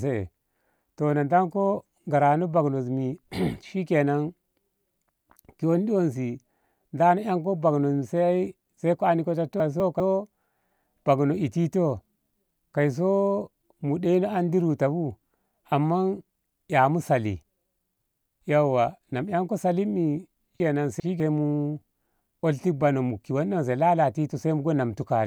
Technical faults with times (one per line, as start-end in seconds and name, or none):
9.60-10.00 chunks out of order
20.60-21.20 chunks out of order